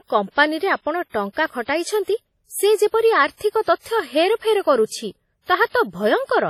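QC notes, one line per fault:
throughout, WMA compression: the speech has a ringing, washy quality, with a hiss that swells and fades along with the voice, and nothing is heard above 14.6 kHz. This is likely a transform codec like WMA working hard at a low bitrate, which fits something near 32 kbps. Long blocks smear quantisation noise over tens of milliseconds around each sound, and weak spectral detail is zeroed out, leaving heavy, audible damage.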